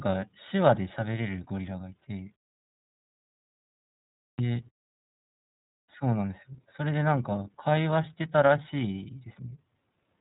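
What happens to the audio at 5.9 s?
At 5.83 s, a clipped start after a pause cuts off the sound's onset. After about 1.2 s of quiet, the output device had slept and needed time to wake, so roughly 58 ms, up to 5.89 s, never plays. The sound bursts in abruptly, missing its first part. On the waveform, flat silence jumps straight into the sound with no rising edge. The spectrogram shows energy beginning as a hard vertical wall.

The iLBC codec also shapes this moment, as it does the whole clip. Each 30 ms frame is coded independently at 13.33 kbps, giving plainly audible roughness and a slightly synthetic quality. A spectrogram shows nothing above 3.8 kHz.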